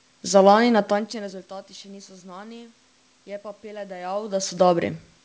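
Listening through the speech, nothing stood out as a technical problem.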